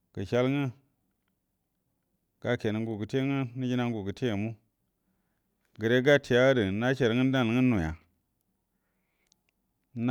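No technical faults are audible.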